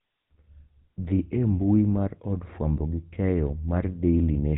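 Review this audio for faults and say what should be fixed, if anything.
GSM full-rate codec damage runs throughout the speech and is plainly audible as a buzzy, gravelly roughness, consistent with 13 kbps full-rate coding. A pulse-driven vocal-tract model rebuilds the voice, so a spectrogram shows nothing above 4 kHz and grainy, smeared harmonics. To prevent it, record or transfer the audio over a wideband path instead of a GSM call leg.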